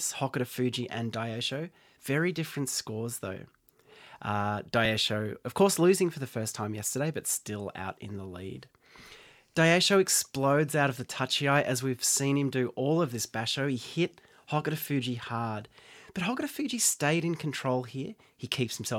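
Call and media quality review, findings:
Overlap between stream segments, two hits: tiny skips in the speech at 4.85 s and 8.84 s. Each loses roughly 17 to 18 ms, so the waveform jumps. Probable culprit is the segmenter or player stitching logic: adjacent segment timestamps overlap, and the player trims that overlap even though the audio wasn't actually duplicated, chopping out real signal. Segments look like about 2 s long.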